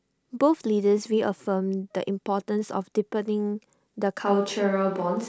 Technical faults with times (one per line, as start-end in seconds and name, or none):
4.27-5.28 switch to a distant microphone